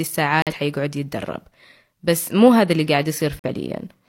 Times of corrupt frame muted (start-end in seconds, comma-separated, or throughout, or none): 0.42-0.53, 3.39-3.50